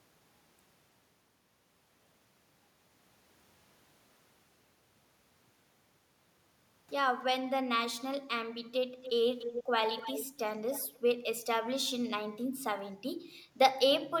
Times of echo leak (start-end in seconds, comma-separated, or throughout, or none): 9.02-9.12, 9.38-9.64, 10.00-10.38, 10.67-10.99